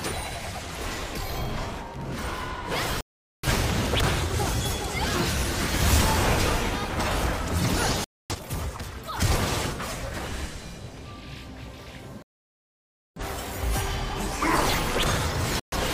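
At 3.01 s the sound cuts to silence until 3.48 s, a digital broadcast dropout. The receiver lost valid frames and muted instead of playing corrupt data. It happens again from 8.04 to 8.36 s, from 12.22 to 13.21 s (the longest gap, nearly a second), and from 15.60 to 15.76 s. Each gap is clean digital silence, with no hiss or crackle as an analogue signal would fade into, and no smeared concealment. The missing material never returns; the programme simply resumes later.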